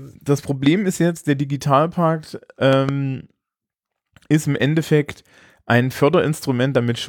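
At 0.66 to 0.69 s, just before "ist jetzt der", a single loud pop cuts through the speech. Its peak sits roughly 10 dB above the speech. The cause is likely a sudden voltage pulse, such as a switch or static discharge, entering the signal path. Between 2.73 and 2.91 s, a second loud pop event arrives as two pops in quick succession, at a similar level. In both places the speech carries on underneath the pops.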